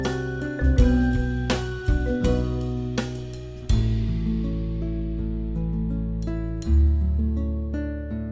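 No technical faults can be heard anywhere here.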